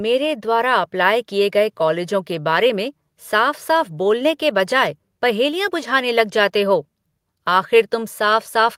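Nothing technically wrong turns up anywhere in this short bit of speech, so there's no problem to place in time or trace back to a cause.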